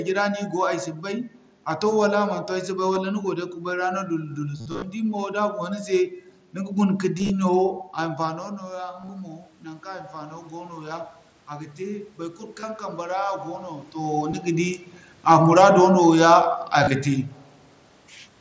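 Concealed Bluetooth headset packet loss occurs at 2.94 s, 4.57–4.84 s and 7.19–7.30 s: lost headset packets are patched by repeating recent waveform. The 2.94 s loss is nearly inaudible. The scattered runs, up to 45 ms, buzz steadily and warble as audio resumes. From 8.14 to 13.96 s, automatic gain rising follows the input's drop of about 15 dB near 8 s, as the talker moves back. The gain climbs about 9 dB, so voice and room noise swell together. Further concealed losses occur at 9.01–9.09 s, 12.60–12.63 s, 14.31 s and 16.84–16.87 s, with brief buzzy patches.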